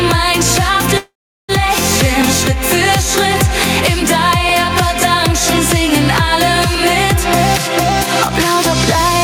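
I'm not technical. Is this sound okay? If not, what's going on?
No. There are four problems.

Throughout, loud and soft parts end up closer in level and the sound is squashed. This is gain pumping, likely from a microphone level set far too high.

From 0.97 to 1.52 s the sound stalls, trails off into near silence, then resumes. This call audio freeze likely came from delayed network data.

From 2.22 to 8.95 s, a click repeats about every 2.26 s. These clock drift buffer slips likely come from two devices keeping slightly different time.

From 8.07 to 8.33 s the sound runs about 19% faster without changing pitch. This jitter buffer speed-up trims tiny pieces to catch up.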